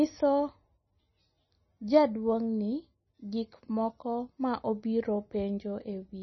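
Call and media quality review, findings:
Likely MP3 compression at a starved bitrate, consistent with roughly 22 kbps; heavy codec damage throughout. Encoder lowpass removes everything above 5.9 kHz, so sibilants dull and the speech sounds muffled. Weak spectral lines drop in and out between frames, causing a watery, swirling texture, metallic chirps on s sounds, and smeared consonant onsets.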